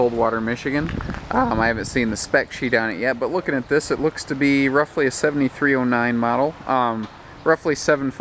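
No technical faults can be heard anywhere in the clip.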